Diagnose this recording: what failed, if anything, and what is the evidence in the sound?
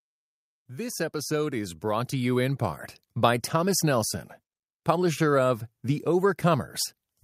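From 0.53 s to 2.9 s the speech and the background noise floor swell together by about 10 dB, a slow ramp rather than a step. This is automatic gain rising in the call processing stage: the gain control judged the input too quiet and raised its gain gradually.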